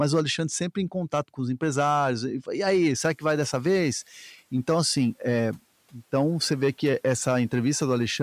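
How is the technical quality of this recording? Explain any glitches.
Two faults are audible in this speech recording: crackling clipping on loud peaks throughout, and a short stretch where background noise comes through too strongly before being pulled back down.

Hard clipping runs through the whole clip. Louder syllables carry a gritty crackle on their peaks. The signal is driven about 6 dB beyond what some stage in the chain can pass, so roughly 2 percent of samples have their tops sliced flat. Those flat edges add harmonics high in the spectrum.

Noise suppressor catching up, from 3.03 to 4.0 s. The background noise jumps up and is briefly too prominent, then sinks over about a second. Around 3 s the room noise rises by about 20 dB, to roughly 31 dB below the speech. The suppressor's noise estimate lags behind that change and takes 970 ms to adapt, after which it trims about 6 dB.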